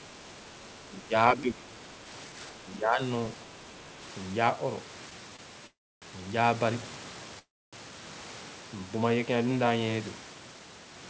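From 0.0 to 0.56 s, then 0.87 to 1.13, 1.34 to 1.64 and 2.29 to 3.0 s, the speech ducks by about 5 to 10 dB. That's likely speech suppressed in double talk, with the echo canceller turning down both sides. Between 5.36 and 5.41 s there's a short stall from a late packet: the jitter buffer ran dry and the last sound gets held for about 24 ms before carrying on. At 5.67 to 6.04 s and 7.39 to 7.75 s come two call audio freezes, each about a third of a second and mostly silent. These likely come from delayed packets, and the audio resumes where it stopped.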